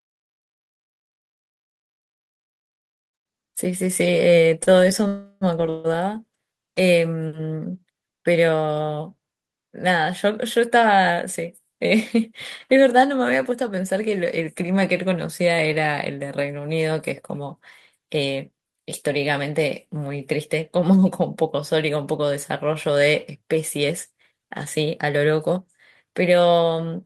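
At 4.63 to 4.69 s a packet arrived late and the jitter buffer briefly ran dry, so the receiver held the last sound for about 28 ms until it came. The result is a short stall: one sound stretched slightly, with a faint buzzy dip and nothing lost.

Two call audio freezes follow, at 5.07 to 5.44 s and 5.69 to 5.98 s, likely from packets held up in transit emptying the buffer. The receiver continued the last sound for about 341 ms and then 150 ms, heard as a fading buzz before the speech resumes where it stopped.

Later the buffer held more audio than it aims for, and the receiver trimmed short pitch-period pieces to cut the delay. This jitter buffer speed-up runs at 110% from 17.99 to 19.40 s, dropping around 150 ms, and at 107% from 22.89 to 26.74 s, dropping around 300 ms. The speech sounds hurried at unchanged pitch.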